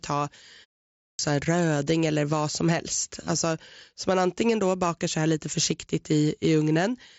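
At 0.89 s, after a 0.32 s pause, a clipped start after a pause cuts about 0.3 s of speech. The output wakes late, so "en röding eller vad" bursts in without its first sounds. Muted pauses only hush the gap and lose nothing. Throughout, the mSBC headset band stops near 7.7 kHz.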